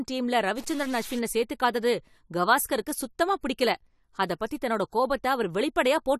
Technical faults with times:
0.57-1.19 stuck bit
3.41-3.43 pre-echo

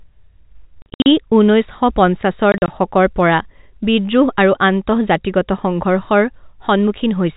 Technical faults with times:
0.82-1.06 packet loss filled with silence
2.52-2.68 packet loss filled with silence

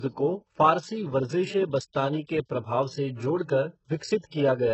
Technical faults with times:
0.00-4.73 HE-AAC compression
1.93-1.95 pre-echo

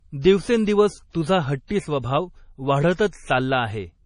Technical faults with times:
0.00-4.05 MP3 compression
1.67-1.70 pre-echo
3.07-3.13 pre-echo

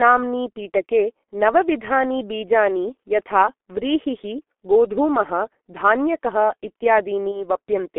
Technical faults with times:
0.00-7.99 G.723.1 codec
7.32-7.43 VoIP packet loss concealed by the speech codec

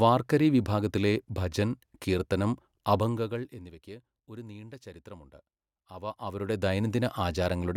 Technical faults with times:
none

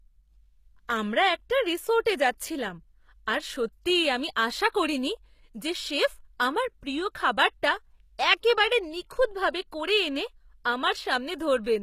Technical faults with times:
0.00-11.82 HE-AAC compression

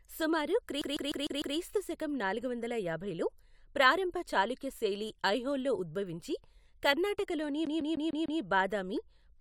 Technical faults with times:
0.82-1.57 CD stuck on one turn
7.66-8.41 CD stuck on one turn

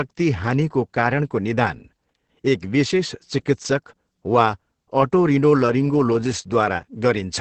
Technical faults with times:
0.00-7.41 Opus voice compression

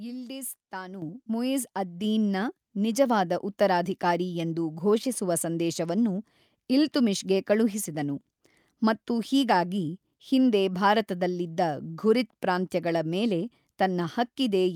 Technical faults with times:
1.02 microphone volume stepped up
2.04 microphone volume stepped up

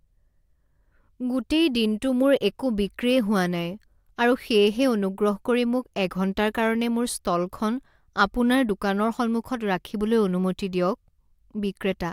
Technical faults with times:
none

